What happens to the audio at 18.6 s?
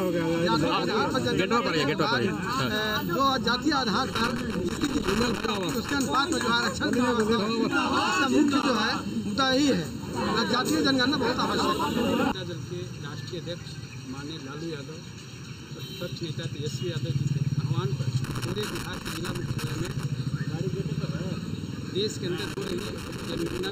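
At 18.6 s you're inside a burst of loose connector crackle that runs from about 18.24 s to 20.04 s. A worn or dirty contact keeps making and breaking, chopping the signal into irregular scratchy crackle.

Under that, the comb filtering from the channel delay is still present, as it is through the whole clip. One channel trails the other by about 0.7 ms, and summing them cancels a row of evenly spaced frequencies starting somewhere around 700 Hz. That leaves the sound hollow and phasey.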